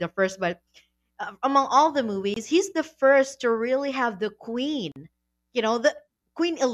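Bluetooth dropouts cut this speech clip twice. The first is a hole of about 21 ms from 2.34 to 2.37 s, between "uh among all the" and "he's the first to". The second is about 43 ms, from 4.92 to 4.96 s. Each gap has abrupt edges or a fade of a few milliseconds, and the speech resumes further along, as though it kept running underneath. The likely cause is packets arriving too late at the headphones and being discarded, one for the shorter gap and two for the longer.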